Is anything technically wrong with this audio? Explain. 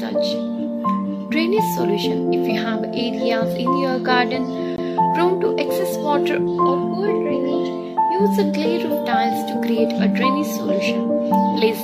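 Yes, a CD skip at 4.76 s: the laser jumps tracks, muting for about 20 ms with a tick, then resuming elsewhere, a flat waveform gap and abrupt spectrogram discontinuity.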